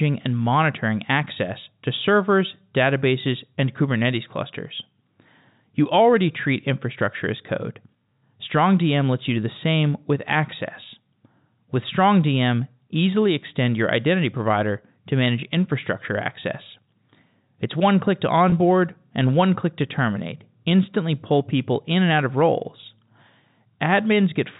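Packet loss with pitch repetition occurs at 18.50 to 18.52 s, just after "one click to". About 20 ms of audio, consistent with one lost packet, was bridged by repeating the last pitch period. The sound briefly holds on a slightly buzzy tone before resuming.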